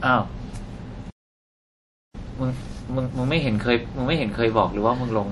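From the start, the speech has nothing above 11.4 kHz, and the smeared top end of a heavy MP3 encoding runs throughout. This is likely low-bitrate audio saved at a high bitrate. The cut-off fits an MP3 near 48 kbit/s. A later high-rate encode cannot restore it.

At 1.10 s the sound stops mid-flow and stays silent until 2.15 s, about one second. This playback stall was likely caused by the player running short of data or being blocked. The speech then picks up again.

From 2.15 s to 3.17 s comes a time-compressed catch-up. The player works off its backlog by cutting and cross-fading small pieces. The speech runs at twice normal speed. Its pitch stays unchanged.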